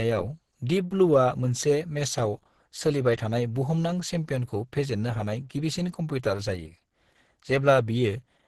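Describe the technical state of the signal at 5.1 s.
At 5.1 s the speech carries heavy damage from what is likely Opus compression, present across the whole clip. It sounds muffled and hoarse, as the hybrid speech mode does at a low bitrate near 12 kbps, and lacks the swirling spectral holes that MP3 leaves.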